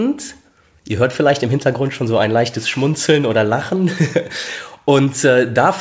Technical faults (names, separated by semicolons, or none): clock drift between sender and receiver; repeated timing corrections